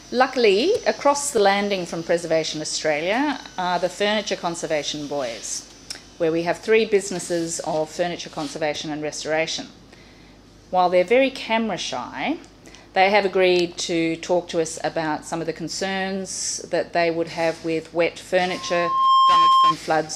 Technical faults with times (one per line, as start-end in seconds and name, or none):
18.49-19.76 loudspeaker feedback squeal